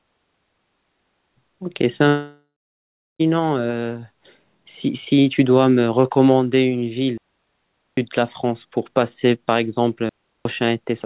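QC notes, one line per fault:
2.08–3.21 s, long network dropout: the last sound smears into a fading buzz, then about 0.68 s of silence, and the speech resumes with roughly 1.1 s gone. This is likely a stretch of lost packets that the receiver's concealment papered over before giving up.
7.18–7.97 s and 10.09–10.45 s, digital wireless dropout: two clean holes of near silence, 0.80 s and 0.36 s long, cut with very short fades and no noise burst either side. The wireless receiver muted when too much data failed to arrive.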